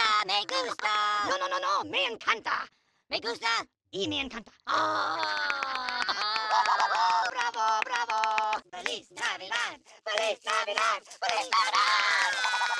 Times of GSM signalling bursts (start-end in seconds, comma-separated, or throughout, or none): none